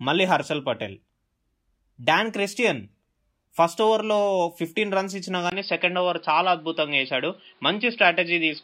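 At 5.50 s the speech goes silent for 20 ms. After that gap the sound is duller and more boxy, and it stays that way to the end. The band is narrower, so the air and crispness are gone. A new, faint background noise sits roughly 40 dB below the speech. The level stays about the same. The likely cause is an input switched to a poorer device in mid-recording, with its own narrower band and noise.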